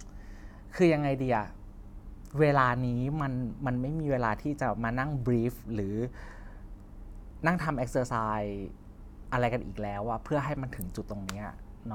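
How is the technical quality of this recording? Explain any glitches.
No technical faults can be heard in this recording.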